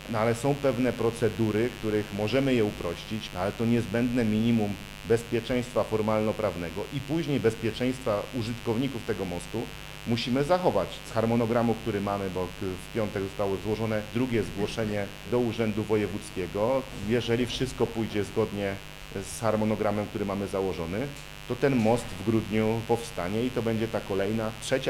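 From start to finish there's a mains buzz running under the sound, a steady, raspy edge rather than a smooth hum. It's built on 50 Hz, and its harmonics climb well up into the kilohertz range, which is why it rasps instead of just rumbling. That points to a dimmer, rectifier or poorly shielded cable letting sharp switching spikes in twice every mains cycle. It sits fairly high, roughly 15 dB under the wanted signal.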